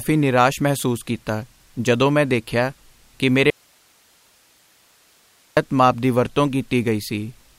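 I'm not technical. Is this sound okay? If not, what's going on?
No. After "ਮੈਂ ਦੇਖਿਆ ਕਿ ਮੇਰੇ", the speech cuts out abruptly from 3.50 to 5.57 s, leaving only faint hiss. It returns at "ਮਾਪ ਦੀ ਵਰਤੋਂ". This is an audio dropout to a faint residue, likely the signal briefly lost while the recording chain stayed live.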